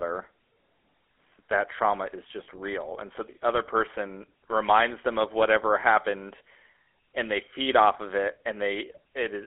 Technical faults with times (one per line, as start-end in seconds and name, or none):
0.00-9.46 GSM full-rate codec
2.44-2.47 lost GSM frames